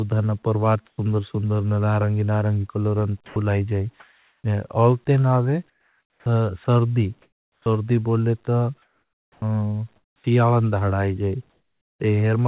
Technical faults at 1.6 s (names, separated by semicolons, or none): none